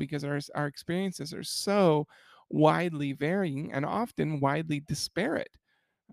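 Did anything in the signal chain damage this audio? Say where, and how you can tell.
No, nothing along the signal chain has left an audible mark on this speech recording.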